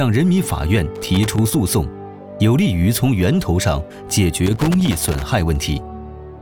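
Loose connector crackle breaks into the audio from 0.95 to 1.54 s and again from 4.46 to 5.22 s: a worn or dirty contact is making and breaking as it shifts, chopping the signal into irregular bursts of scratchy crackle.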